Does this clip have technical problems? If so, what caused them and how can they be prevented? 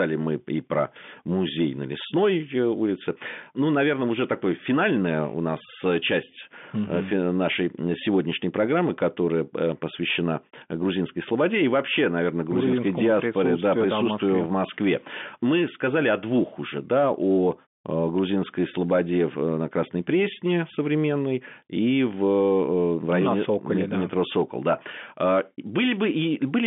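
No, nothing stood out on listening to this speech clip.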